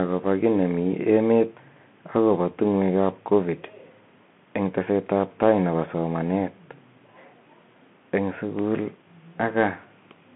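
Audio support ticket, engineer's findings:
Bluetooth CVSD headset codec, throughout: 150 Hz to 3.4 kHz band, nothing above 3.8 kHz. Scratchy s sounds and granular hiss from one-bit slope tracking, unlike a clean telephone bandlimit.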